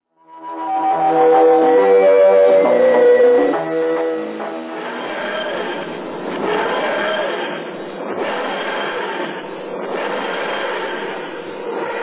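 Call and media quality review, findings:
No audible faults found; nothing to raise.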